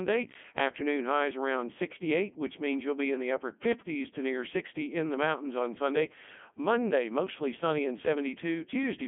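This speech clip has passed through the Codec 2 vocoder from start to finish, giving a robotic, buzzy voice rebuilt from sine waves rather than the original waveform. The heavy damage fits the 3.2 kbit/s mode, band-limited to roughly 200 Hz–3.4 kHz, with nothing above 3.6 kHz.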